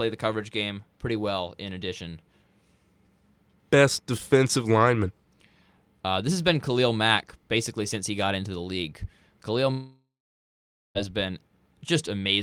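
A long network dropout runs from 9.71 to 10.98 s. The speech gives way to a fading, buzzy continuation of the last sound, then 0.87 s of near silence, and returns with 1.24 s lost, likely because packets stopped arriving and the receiver filled the gap.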